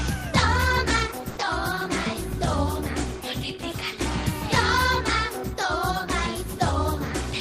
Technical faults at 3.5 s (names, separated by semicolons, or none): none